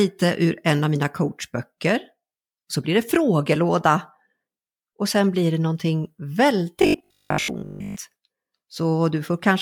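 From 6.82 to 7.96 s the speech takes on robotic sound from repeated short buffers: a rigid, metallic buzz at 50 Hz that still loosely tracks the words. The likely cause is audio arriving too slowly, so a 20 ms chunk is looped over and over while fresh material is skipped, and most of that stretch is made of repeats. Unlike steady mains hum, which would sit under the whole clip, this buzz stops when normal audio resumes.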